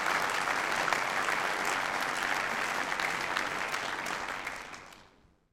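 Frames were overlapped and added back together with a spacing that doesn't sum to a constant gain. The result is overlap-add ripple running from start to finish. The level swells and dips once per frame, by about 6 dB, at a rate of roughly 100 times a second. At that speed the dips don't register as separate pulses. They merge into a metallic buzz with extra tones around it, laid over all of the sound.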